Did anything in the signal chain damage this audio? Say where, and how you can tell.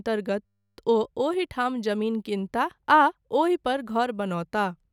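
Yes. A system hang loop occurs from 0.46 to 0.78 s, at the driver and buffer stage. There the speech turns into a steady 100 Hz buzz: one 10 ms slice repeated exactly, 32 times. The host or driver stalled while the audio hardware kept replaying the same short ring buffer. With a slice that short, the repeats fuse into a tone rather than a stutter, and the speech resumes with little or nothing skipped.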